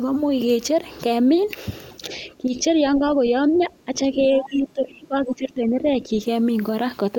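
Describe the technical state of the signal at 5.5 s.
At 5.5 s the speech sits inside a stretch of speech suppressed in double talk, running from 4.39 to 6.18 s. The level sags by up to around 15 dB and the sound thins and breaks up, likely because an echo canceller mistook the talker for returning loudspeaker echo while both sides spoke. On a waveform the envelope pinches and gaps; a spectrogram shows the upper bands fading and patchy energy across this span.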